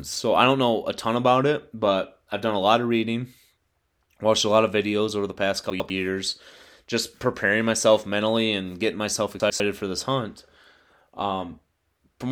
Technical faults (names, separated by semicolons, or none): chunks out of order